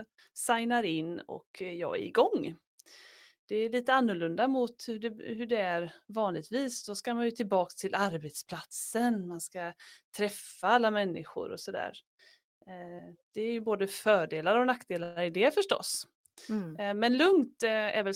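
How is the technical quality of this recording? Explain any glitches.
Two glitches stand out in the speech, both near the end.

At 15.03 to 15.32 s, just after "ju både fördelar och" and before "det förstås", the speech stalls and a brief buzzy continuation of the last sound hangs in its place, fading rather than dropping to silence. This is a call audio freeze. Packets were likely held up in transit, so the jitter buffer ran dry and the receiver stretched the final sound for about 128 ms. When the packets arrived, the speech picked up exactly where it stopped, so nothing was lost but that gap was added.

From 17.10 to 18.12 s the speech sounds hurried, running at about 107% speed while the pitch stays the same. This is a jitter buffer speed-up. The buffer had built up more audio than it aims to hold, so the receiver trimmed many tiny slices, each one or a few pitch periods long, in quick succession. 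Together those cuts removed roughly 70 ms and brought the delay back down.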